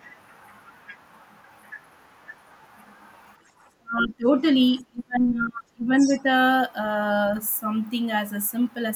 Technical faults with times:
3.42-3.52 background gated by the echo canceller
3.80-4.45 speech suppressed in double talk
4.74-6.27 speech suppressed in double talk
4.78-4.83 other side's voice leaking through
5.95-6.20 other side's voice leaking through
7.25-7.29 other side's voice leaking through

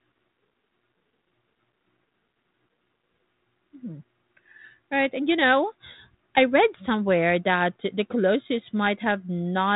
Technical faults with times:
none

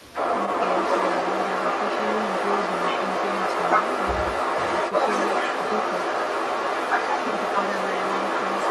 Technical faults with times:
0.00-8.71 echo leak

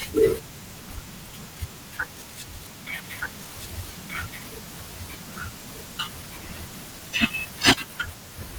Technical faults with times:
3.04-7.74 doubled audio track

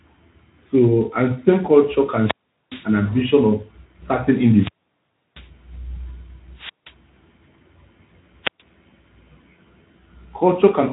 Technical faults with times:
2.06-2.96 wireless microphone squelch dropout
4.49-5.51 wireless microphone squelch dropout
6.54-6.95 wireless microphone squelch dropout
8.42-8.62 wireless microphone squelch dropout

